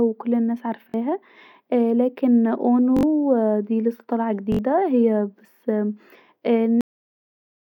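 At 0.90 to 0.94 s, 2.97 to 3.03 s and 4.52 to 4.59 s the speech stutters with a repeated buffer. Fresh audio arrived late, so the device replayed its last block of about 21 ms, which fits a 1024-sample buffer. It played twice more at the first spot and three times more at the others, and roughly 40 ms and then 70 ms of speech went missing. On a waveform each block appears as identical copies placed end to end. A spectrogram shows vertical seams at each join and a periodic pattern near 47 Hz.

At 6.81 s the clip ends with a cut-off end. The final buffers were never played, so the speech stops mid-sound and falls straight to digital silence with no natural decay. On a waveform the signal drops instantly to a flat line with no tail. A spectrogram shows energy ending at a sharp vertical edge, with blank space after it.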